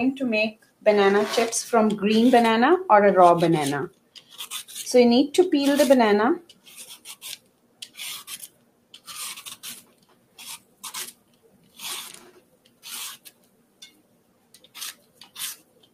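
A noise suppressor built for speech has been left running on this audio, and it is treating steady, sustained material as noise. Throughout, the level rises and falls by around 20 dB as the processor clamps down and releases, so attacks come through while held sound and decaying tails sink, giving a pumping, thinned-out character. The noise suppressor cuts the sound most heavily in seven places: 0.52–0.85 s, 3.89–4.33 s, 6.42–7.97 s, 8.48–9.07 s, 9.81–11.79 s, 12.18–12.84 s, and from 13.17 s to the end. In each, sustained or fading sound drops by about 13 to 14 dB, so tails are cut short and held passages sink beneath the louder onsets. The longest of these are around 9.8 to 11.8 s and the final stretch.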